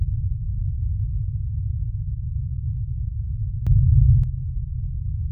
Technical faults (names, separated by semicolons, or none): sudden gain jump